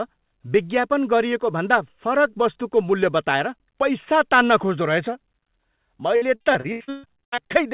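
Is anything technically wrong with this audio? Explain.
Yes. From 6.16 to 7.52 s the speech breaks up with repeated packet loss, producing a robotic sound. Over that stretch about a dozen holes open in the stream, the longest 136 ms, and each is patched by stretching the last received sound, so nearly half the span is concealment. Unlike a single dropout or a one-off click, the losses follow one another closely, giving choppy speech with pieces missing. The audio also stops at 4 kHz throughout, which fits narrowband G.711 call coding.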